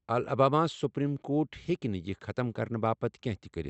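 Speech heard through a call path whose codec band-limits it to about 8 kHz, with no technical faults to report.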